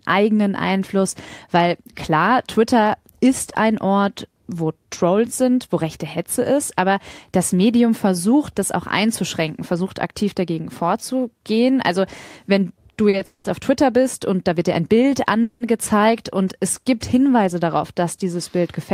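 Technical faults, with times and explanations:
13.09 to 13.15 s and 13.17 to 13.21 s, short stall from a late packet: the sound just before each point is briefly held, about 40 ms the first time and 20 ms the second, with a faint buzz or dip, and then continues from exactly where it paused. A packet arrived after its playout time, so the receiver stretched the last sound until it came. Nothing is lost. The playback simply runs 40 ms and then 20 ms later. Unlike the freezes that follow, these are too brief to fade and read as a tiny hitch rather than a gap.
13.25 to 13.46 s and 15.42 to 15.62 s, call audio freeze: the last sound carries on as a buzz or hiss that decays, for about 190 ms and then about 180 ms. In the first event it fades to silence for the final 50 ms. In the second it never reaches silence. The audio then resumes at the same point, so nothing is missing, but the playback falls further behind each time. 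The likely cause is packets held up in transit that drained the jitter buffer. A freeze is set apart from a short stall by its length and by the fading tail that replaces the held sound.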